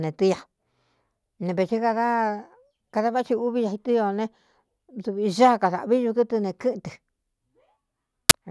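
File tags played as audio appear at 8.30 s, near the end of the speech: an embedded cover picture, stored as compressed data, is read out as if it were samples, producing a very loud burst of white-noise static with hard edges.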